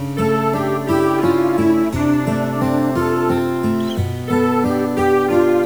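From start to end, a stuck bit is heard as distortion riding on the sound, with quiet gaps filled by noise. One converter or data line likely holds a bit fixed, so the waveform shows stepped offsets and the spectrogram shows broadband hash even in pauses.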